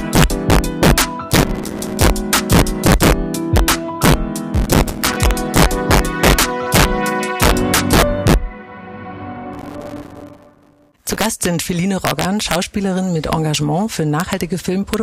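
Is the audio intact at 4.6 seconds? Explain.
No, 4.6 seconds falls inside a burst of processor overload crackle running from about 4.54 to 5.17 s. The processor couldn't get through its small audio buffers on time and kept missing deadlines back to back, with each miss dropping out to silence. The gaps are tiny, which fits buffers of a few milliseconds, and with so many in a row they blur into a gritty, tearing crackle over the sound until the load eases.

There's also integer overflow throughout the clip, and it's present at 4.6 s too. The level is pushed roughly 4 dB past the integer limit. Instead of being held at the ceiling, the peaks that go over it wrap around to the opposite sign and jump across the full range. Only a small share of samples go over, but each one gives a harsh, violent crack on the loud moments, much sharper than ordinary clipping.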